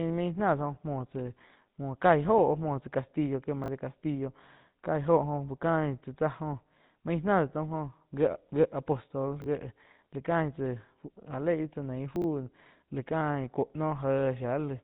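The whole thing runs through the GSM full-rate codec, which fits 13 kbps, so the speech has that gritty, buzzy texture and nothing above about 3.9 kHz. At 3.64, 9.42 and 12.16 s there are chunks out of order: 20 ms blocks played one chunk late at the first two and three chunks late at 12.16, giving brief jumbled stutters.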